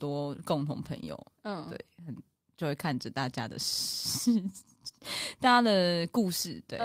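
Listening to the speech recording, nothing technical stood out.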